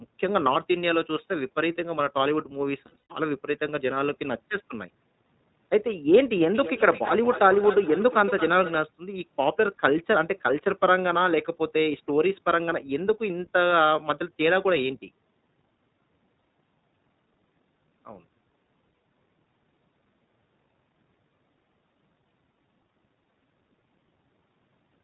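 Speech passes throughout through the iLBC codec, and the damage is plainly audible. Each 20 ms frame's excitation is coded on its own in a narrowband channel, consistent with the 15.2 kbps mode, so nothing above 4 kHz survives and the voice sounds slightly rough and synthetic. Between 2.86 and 3.12 s, lost iLBC frames break the signal: about 200 ms of audio, likely ten 20 ms frames, goes missing in clusters across 240 ms, the longest run about a tenth of a second. The decoder fills each gap by repeating the last pitch cycle blended with noise, heard as a brief held, buzzy vowel, and clean speech returns almost immediately. From 6.52 to 8.78 s, feedback echo between two devices sets in: a second device on the same call replays this microphone's signal into the room, where it is picked up again beyond the reach of the local echo canceller. Each phrase returns roughly every 200 ms, thinner and more ringing, peaking at about 11 dB below the speech.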